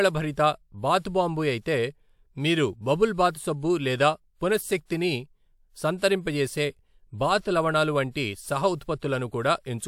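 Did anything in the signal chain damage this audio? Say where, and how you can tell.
Yes. The codec stage left pre-echo at about 4.89 s: a brief hiss, about 16 ms long, sits just ahead of a sharp speech attack, which sounds smeared. Quantisation noise sized for the loud onset spread back through the quiet start of its transform block. Unlike a click, it is noise-like and tied to the attack.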